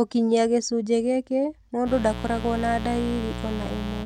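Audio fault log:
1.84 to 4.06 s, mains buzz: right after "gĩcunjĩ gĩkĩ" a raspy buzz kicks in and sits under the speech until the clip ends, fairly loud, only about 10 dB down. It's built on 60 Hz. Something like a dimmer, a rectifier or an unshielded run is letting sharp switching spikes into the signal twice every mains cycle, and those spikes carry harmonics way up into the kilohertz range. That's why it sounds gritty rather than like a smooth hum.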